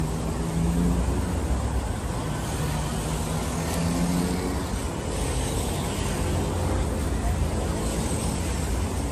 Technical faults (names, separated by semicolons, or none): generation loss